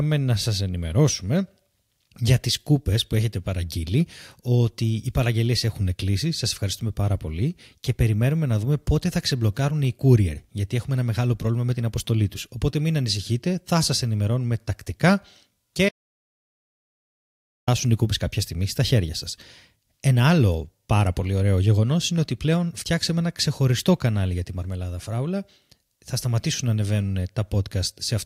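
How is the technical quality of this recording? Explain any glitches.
The recording has one clear fault, an audio dropout to silence from 15.89 to 17.68 s. The input was likely lost while the recorder kept writing silence, so the speech cuts to dead silence with no room tone for about 1.8 s before resuming on "οι κούπες κάποια στιγμή".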